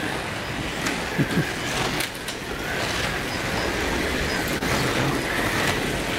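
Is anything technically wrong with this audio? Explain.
Yes, two faults. Throughout, a block size mismatch (padded) gaps every block with silence, giving a 43.1 Hz buzz that fits a 1024-sample read block, with audio slowed to 0.938× with its timbre kept, unlike resampling errors. Around 4.58 to 4.63 s, short concealed packet loss fills about 20 ms of missing audio with 23 ms of extrapolated sound, a single brief smear rather than a steady buzz.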